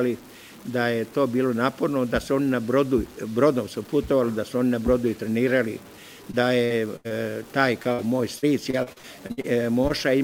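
Throughout, the audio has a grainy distortion that tracks the signal, with an error floor roughly 25 dB below it. This is likely low bit depth without dither, truncated to around 7 bits.

From 6.31 to 7.12 s, repeated packet loss leaves four gaps, the longest 82 ms. Each gap is patched by stretching the last sound, giving choppy, robotic audio with pieces missing.

At 7.82 to 7.87 s, a short concealed packet loss fills about 20 ms with continued sound, heard as a brief smear.

From 7.93 to 8.00 s, a burst of packet loss drops about 60 ms. The continued sound fades across the hole before the audio resumes further on.

From 8.38 to 9.46 s, repeated packet loss returns with eight gaps, the longest 60 ms. About a quarter of that stretch is patched, sounding choppy and broken.

At 9.88 to 9.92 s, another short concealed packet loss briefly smears about 20 ms of audio.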